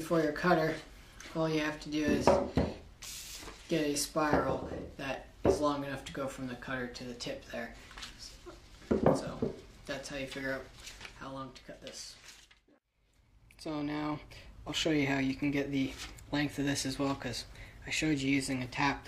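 No technical faults can be heard anywhere in this clip.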